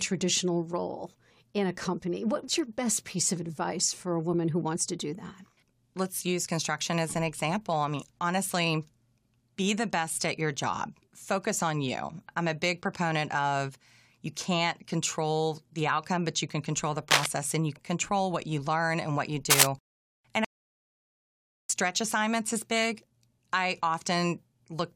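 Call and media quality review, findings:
Cable scratch noise at 17.10 to 17.26 s and 19.50 to 19.70 s. Dense, ragged bursts over the speech. The second is louder, roughly 10 dB above the signal against about 5 dB. Likely a worn cable or connector moved, its contact resistance fluctuating.

Audio dropout to silence at 20.45 to 21.69 s. About 1.25 s of total silence, with no room tone, and the speech in that span is lost. The input likely dropped at the device or link while the recorder kept writing silence.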